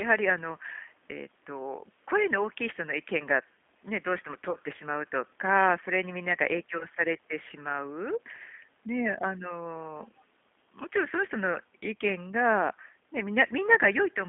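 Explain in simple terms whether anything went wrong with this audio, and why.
The whole recording has passed through the G.729 codec, a low-rate phone-call codec that rebuilds speech from a simple model of the voice. Everything outside roughly 200 Hz to 3.5 kHz is gone, so the speech sounds thin, slightly rough and synthetic.

There are also two spots of VoIP packet loss concealed by the speech codec, at 4.51 to 4.56 s and 6.78 to 6.86 s. Audio went missing, and the decoder filled the gaps by stretching the last sound into a fading buzzy tone or coloured noise that stays distorted briefly afterwards. The first gap fits about 40 ms lost, two packets; the second fits about 20 ms, one packet.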